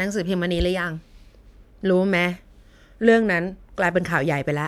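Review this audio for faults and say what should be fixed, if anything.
Nothing here needs fixing, since no technical faults turn up anywhere in this speech recording.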